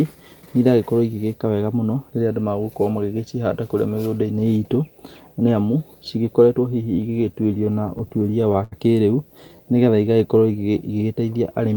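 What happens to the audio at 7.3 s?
The speech stutters. Repeated stalls run from 7.01 to 8.74 s. Late packets keep draining the jitter buffer, so sound is stretched to fill gaps up to 81 ms, and the speech drags. Underneath, the video or display buzz continues. A faint 59.94 Hz hum with hash, roughly 35 dB below the speech, sits alongside a thin 15.7 kHz line tone.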